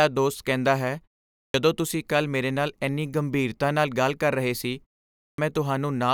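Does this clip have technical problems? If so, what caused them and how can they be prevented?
Yes. The speech shows a clipped start after a pause twice: at 1.41 to 1.54 s, about 130 ms is lost after a 0.42 s gap, and at 5.24 to 5.38 s, about 140 ms is lost after a 0.46 s gap. The output device drops into sleep during the silence and needs that time to wake, so the onset vanishes. On a waveform, the envelope jumps from flat silence to full amplitude with no rise. On a spectrogram, the energy of the first sounds is missing. Preventing this means disabling the device's idle power-saving or keeping a low-level signal running through pauses.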